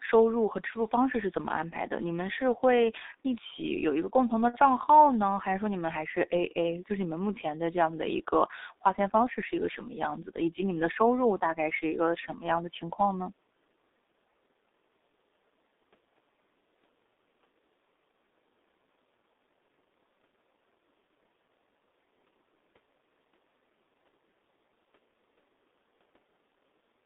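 A G.723.1 codec runs through the whole of this speech recording, working at a rate consistent with roughly 6 kbit/s and a telephone band of 250 Hz to 3.7 kHz. Its coarse 30 ms frames and heavy compression leave the voice muffled and hoarse, with consonants smeared.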